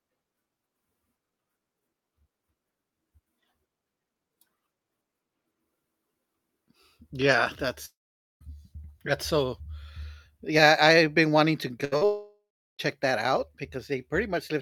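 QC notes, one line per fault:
7.85–8.43 s, long network dropout: The sound stops being real audio for about 0.56 s. The tail of the last sound is briefly carried on as a fading buzz or hiss, then roughly 0.48 s of near-silence follows before audio returns further along, with the intervening stretch simply gone. This is likely a network outage long enough that the receiver's concealment ran out and it fell back to quiet.
11.85–11.94 s, burst of packet loss: Just after "I've been wanting to", about 80 ms of speech is missing. The receiver extends the preceding sound for about 70 ms, turning it down as it goes, so a voiced segment becomes a held, fading buzz. Speech then resumes from a later point, not where it left off, because the lost chunk of consecutive packets was never delivered.
11.98–12.03 s, short concealed packet loss: Another 40 ms hole in the same phrase, patched by about 35 ms of continuation of the last sound before blending back into real speech. 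It comes across as a small smear or wobble, and a brief sound falling in that gap can disappear entirely.
12.05–12.81 s, long network dropout: Right after the previous losses, about 0.74 s vanishes. A fading continuation gives way to roughly 0.37 s of near-silence, and the audio picks up again at "that out", skipping whatever lay between. The cluster of three faults in quick succession points to the connection stalling outright at this point.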